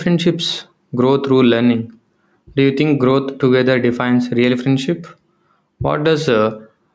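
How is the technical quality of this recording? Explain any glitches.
The main problem is gain pumping, which runs through the whole recording rather than showing up at particular moments. The level is pulled down each time the speech gets loud, moving by about 5 dB. The likely cause is input gain set far too high for the microphone, with a fast limiter or compressor pulling it back down on every loud syllable and letting it recover in the gaps. You hear that as a squashed quality: the loud and soft parts end up closer together in level than they should. The call's microphone processing is also audible in the usual way, with the lowest bass filtered out and nothing above 8 kHz, but that's normal for a call path and not a fault.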